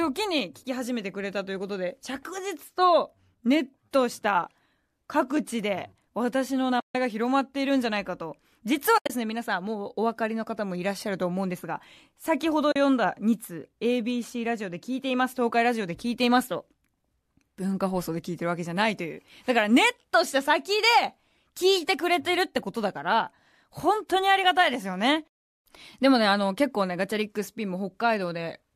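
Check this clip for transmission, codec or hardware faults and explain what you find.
There's one real problem here: three spots where the speech drops out briefly, which is AAC frame loss with muting. The underlying coding sounds like light low-delay AAC compression, likely AAC-ELD at around 64 kbps.

The dropouts sit at 6.80–6.95 s (150 ms gone), 8.98–9.10 s and 12.72–12.76 s (40 ms). The middle one isn't a single hole. About 110 ms of audio is missing in pieces across roughly 120 ms, with the longest stretch around 70 ms. What's happening is that the decoder got nothing for those frames and zeroed them. The overlapping windows fade the speech out and back in, so you hear soft-edged holes. The durations fit 10 ms frames.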